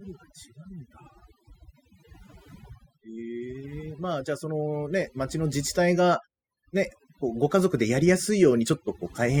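Throughout, overdone noise removal pulls individual frequency bands down whenever they near the noise estimate, leaving twinkling specks in near-silence, unlike gating's whole-signal cuts.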